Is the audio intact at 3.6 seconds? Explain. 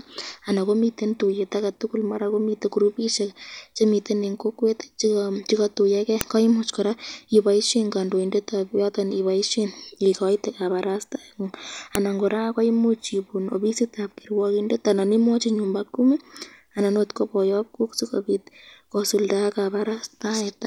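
Yes, at 3.6 seconds the speech runs through cleanly, with no dropout, click, distortion or other fault to be heard at that moment.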